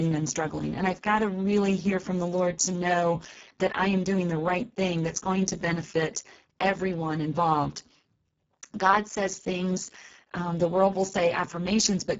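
Speech runs through the Speex codec for all 12 seconds. Its hoarse, buzzy, near-robotic voicing from starved CELP excitation (not transform-codec warble), with nothing above 7.7 kHz, suggests roughly 6 kbps.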